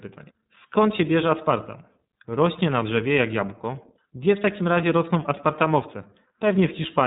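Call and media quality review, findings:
iLBC codec, throughout. Narrowband speech with nothing above 3.8 kHz, so the top end is missing. Plainly audible coding damage: slightly rough, synthetic texture. Probable component: VoIP media path encoder. Mechanism: each frame's excitation is coded independently of the previous one, and the frame timing fits the 30 ms, 13.33 kbps mode.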